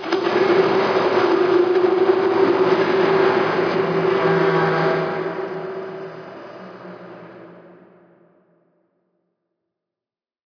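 Nothing stood out on listening to this recording of everyday sounds.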